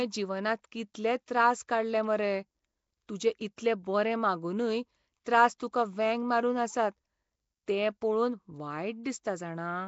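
Speech runs throughout with a rough, hissy halo and a smeared, underwater quality. Nothing is heard above about 7.7 kHz. The damage is plainly audible. The likely cause is Nellymoser compression, at a rate that fits about 32 kbps. Weak bands get no bits and are filled with noise. Pre-echo is heard at 0.94, 3.56, 5.25 and 8.01 s. A brief hiss of 10 to 17 ms comes just before each sharp attack. The block's coding noise spills into the quiet gap ahead of the onset, which blurs it.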